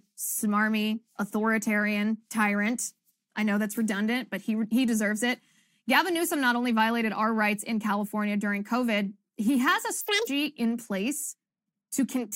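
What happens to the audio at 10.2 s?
At 10.2 s the speech is being read two samples at a time, giving double speed. The fault runs from about 10.01 s to 10.27 s. The reader treats each pair of samples as a single frame, as if the stream held two channels or wider samples. So the audio plays at 2 times its proper rate for that quarter second. The speech comes out twice as fast and an octave higher.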